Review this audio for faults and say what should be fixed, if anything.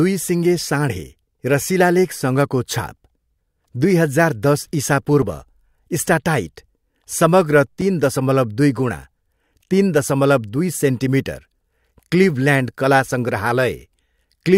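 Two brief blips at 5.22 s, right after "दुई हजार दस", and at 7.81 s come from damaged data in the compressed stream, where the decoder misreads corrupted frames and loses sync. Re-export from a clean source file and verify transfers with checksums.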